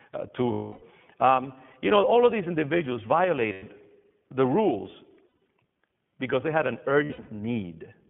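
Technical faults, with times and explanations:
Throughout, iLBC codec: the sound is thin and narrowband, held between about 150 Hz and 3.4 kHz, with a slightly rough, synthetic edge. iLBC codes each frame's excitation independently, and the texture fits its 15.2 kbps mode with 20 ms frames.
0.52–0.83 s, 3.52–3.63 s, 5.28–5.47 s, 7.04–7.30 s, lost iLBC frames: brief held, buzzy vowel-like smears follow "uh to", "the rules" and "because they had an". The decoder repeated the last pitch cycle with noise, covering 300, 100, 140 and 180 ms of loss, the later two scattered in runs of about 70 ms at most.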